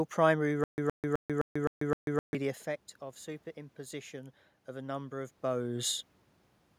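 From 0.64 to 2.35 s, a stutter with silent gaps: a 117 ms burst replays six times every 258 ms, with 141 ms of digital silence between. The likely cause is a stalled stream. A waveform shows identical blocks alternating with flat silent stretches.

From 3.54 to 5.98 s, automatic gain rising: after the input falls about 12 dB, gain climbs about 5 dB, swelling speech and room noise together. The envelope and spectrogram noise floor brighten gradually.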